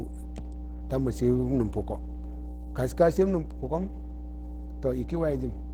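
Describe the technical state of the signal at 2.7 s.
Mains hum at 2.7 s runs through the whole clip, so it is present at that moment too. A ground loop or nearby transformer is leaking the 60 Hz power-line frequency into the signal path, adding a steady low drone with some low harmonics underneath the speech. It is strong, sitting only roughly 10 dB below the speech itself, so it stays clearly audible even while someone is talking.

Opus compression damage at 2.7 s also spans the entire clip. The speech sounds muffled and hoarse, with a grainy, roughened texture that is plainly audible. That character fits Opus in its hybrid speech mode, which it switches into at a low bitrate around 16 kbps. This is likely the cause. At such a tight budget the encoder approximates detail rather than preserving it, even though the content still extends to about 20.2 kHz.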